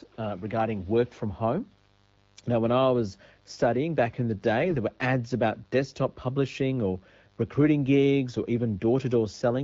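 A mains buzz runs under the whole recording. Sharp switching spikes entered the signal twice per cycle of 50 Hz mains. Their harmonics climb into the kilohertz range. The result is a steady, raspy buzz, roughly 35 dB below the speech.

AMR bit errors strike from 4.62 to 4.76 s, after "studying back in the" and before "were ads about desktop". The 0.15 s span fits about seven 20 ms frames. A weak link flipped a few percent of the less protected bits. The pitch and level hold, but the voice turns hoarse, scratchy and gargly.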